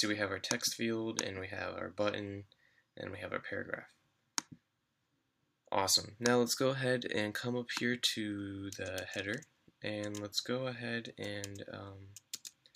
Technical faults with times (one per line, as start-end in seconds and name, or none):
none